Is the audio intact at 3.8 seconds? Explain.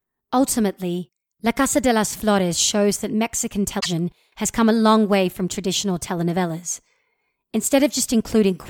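No. From 3.78 to 3.86 s the speech clip hits damaged data in a compressed stream: corrupted bytes make the decoder misread those frames, lose sync and hunt for the next valid frame header. The roughly 80 ms span comes out as a short chirp, squawk, click or hole.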